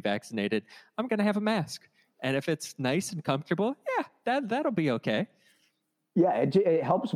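Nothing stood out as a technical fault on listening to the speech in this recording.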